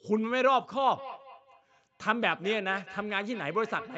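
From 0.92 s to the end, each phrase of this speech recording returns as a thin, ringing repeat roughly a fifth of a second later, peaking about 17 dB below the voice. That is feedback echo between two devices on one call, their speaker-to-microphone loop bypassing each echo canceller. The audio is limited to 8 kHz, consistent with a wideband call codec.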